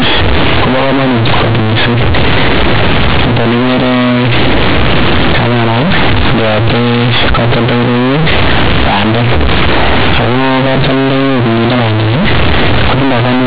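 Companded audio read as linear runs throughout the clip: mu-law telephone bytes are played back as plain 8-bit samples without expansion, so every sign change swings across half the range. Quiet and loud speech become equally large, giving harsh, buzzy distortion and heavy noise in pauses, all within a telephone band that stops at 4 kHz.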